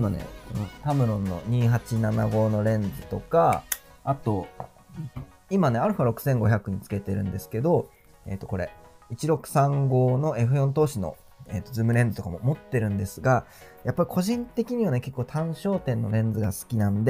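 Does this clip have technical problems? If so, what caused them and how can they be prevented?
No, the signal shows no technical faults at any point, so there is nothing here to trace to a cause or to prevent.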